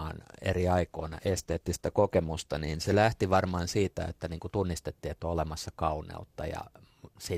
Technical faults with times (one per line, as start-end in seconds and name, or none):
0.94-2.94 adaptive stream at a lower bitrate